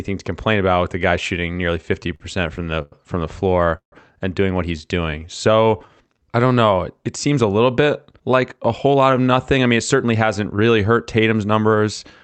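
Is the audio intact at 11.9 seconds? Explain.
Yes, the speech at 11.9 s is intact, carrying only the ordinary coding of the WebRTC call path, which holds the audio below 8 kHz.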